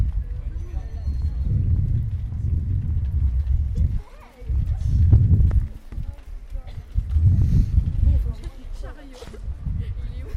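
No technical faults can be heard anywhere in this audio.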